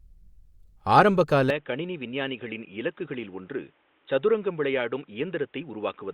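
Speech, and at 1.5 s the sound changes abruptly and stays changed to the end: the band narrows to nothing above 3.8 kHz, the level drops by roughly 5 dB, and a faint new noise floor appears, around 40 dB below the speech. There is no gap at the change. The likely cause is an input switched to a poorer device, such as a headset's call profile, whose narrower bandwidth and different gain and noise produce this duller, boxier sound.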